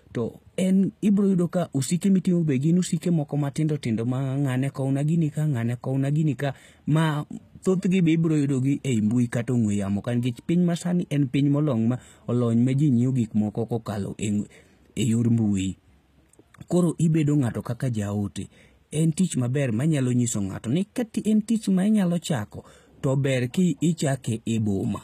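Throughout this speech clip, the treble sounds bright but synthetic, with gritty, metallic s sounds and nothing above 14.9 kHz. That points to HE-AAC compression at a low rate, likely around 20 kbps. Plain low-bitrate coding would dull the top end, whereas here copied-up bands stand in for the real highs.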